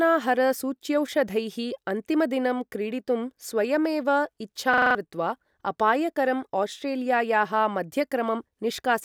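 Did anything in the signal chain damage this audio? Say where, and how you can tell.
Yes. From 4.74 to 4.95 s there is a system hang loop at the driver and buffer stage. A single 42.7 ms slice of the speech repeats exactly five times, giving a rapid stutter at about 23.4 Hz. The host or driver stalled while the audio hardware kept replaying its last ring buffer, a length that fits a 2048-sample buffer. About a fifth of a second of real audio was lost and replaced by the loop.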